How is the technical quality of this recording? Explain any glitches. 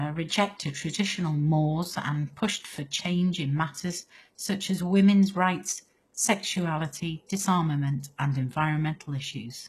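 The recording has plainly audible codec damage throughout. It is likely HE-AAC compression at a very low bitrate. The treble is rebuilt from copied lower bands, so s sounds turn gritty and metallic. Nothing remains above 12.3 kHz.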